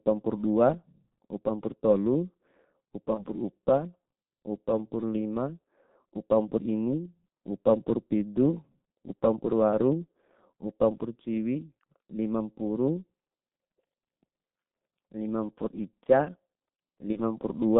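G.723.1 codec damage runs through the whole clip. The speech passes only between roughly 150 Hz and 3.7 kHz, and the heavy, coarse coding fits the 6.3 kbit/s mode of this early telephony codec. It works in 30 ms frames and updates its model of the voice slowly, so the speech sounds muffled and hoarse, with smeared consonants and a rough, grainy texture. Nothing in the upper range survives.

VoIP packet loss concealed by the speech codec strikes at 3.14 to 3.26 s and again at 17.12 to 17.18 s. Each gap points to a single lost 30 ms frame. The decoder filled it by carrying forward its last pitch and filter settings at falling gain, so the speech briefly turns into a stretched, fading sound. The damage lingers for tens of milliseconds or more past the gap while the decoder's frame-to-frame state recovers.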